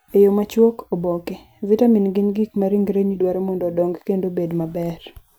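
Nothing stood out as a technical problem on listening to this speech recording.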